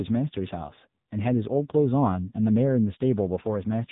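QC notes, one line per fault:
Throughout, AMR narrowband mobile codec: the speech has nothing above about 3.8 kHz, so it's boxed into phone-line band. The damage is heavy, with a buzzy, synthetic edge from the vocal-tract model running short on bits, which fits a low rate around 6.7 kbps.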